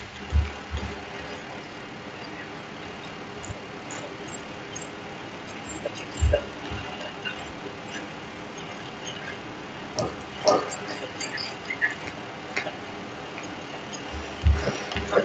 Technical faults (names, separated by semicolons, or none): echo leak